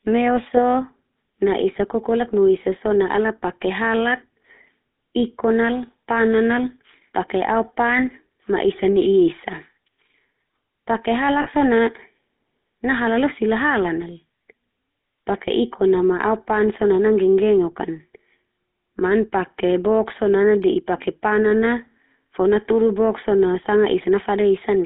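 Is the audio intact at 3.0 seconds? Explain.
No. At 3.0 seconds the speech carries GSM full-rate codec damage, and that damage runs through the whole clip. This codec models the vocal tract as a filter. It drives that filter with a coarse, regularly spaced pulse train that keeps only a third of the excitation detail. The result is a plainly audible buzzy, gravelly roughness. The band is confined to about 200 Hz to 3.7 kHz. The sound fits a 13 kbps GSM stream.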